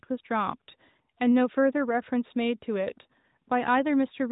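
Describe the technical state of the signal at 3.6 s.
At 3.6 s the speech is intact, with no fault present; what is heard there is the normal band-limited sound of the AMR narrowband mobile codec path, with nothing above about 3.8 kHz.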